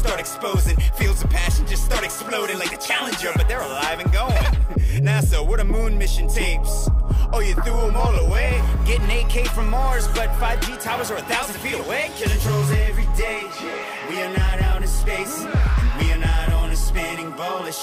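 Nothing in the audio stood out as a technical problem on listening.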